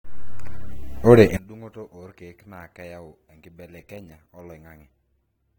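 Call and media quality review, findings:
From 1.37 s to end: speech drops about 26 dB, leaving a faint residue. Likely one channel inverted; centred content cancels on mono sum. Waveform: sharp amplitude collapse. Spectrogram: all frequencies drop together.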